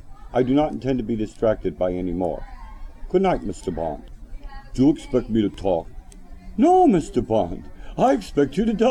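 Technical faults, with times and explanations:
5.54 s, block of digital silence. The sound drops out for about 1.5 ms and returns with no fade. The abrupt edges sit so close together that they merge into a single tick. The gap fits a 64-sample block the program failed to fill in time.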